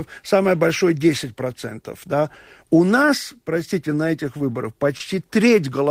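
It's a speech clip with two spots of short concealed packet loss. Right after "нас простите на этих", about 20 ms of audio never arrived in time at 4.37 to 4.41 s, and again at 4.97 to 5.02 s. The receiver patched each gap by extending the preceding sound, so you hear a quick smear or wobble.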